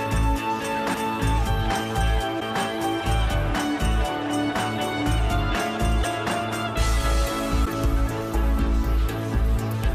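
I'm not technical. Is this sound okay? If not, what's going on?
No, there are two kinds of problem.

At 0.93 s the sound skips forward, losing about 150 ms. You hear a tiny smeared blip rather than a sharp click. This is compressed frames skipped: the file stores sound in short blocks of about 26 ms each, and a run of them, roughly seven, never got played. The blocks overlap slightly, so the jump is softened into a blip.

At 2.39 to 2.42 s, 6.02 to 6.05 s and 7.64 to 7.67 s there is a brief glitch lasting about 30 ms, where the sound briefly breaks up. The likely cause is a broken MP3 bit reservoir. MP3 files save space by letting one block borrow room in the blocks before it. If blocks go missing, the next one reaches back for its borrowed data, finds the wrong bytes, and comes out garbled.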